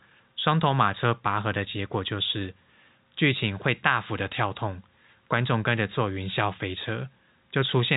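The speech carries no technical faults, coming through as ordinary G.711 telephone coding with nothing above about 3.8 kHz and at most a faint trace of that format's level-following quantisation noise.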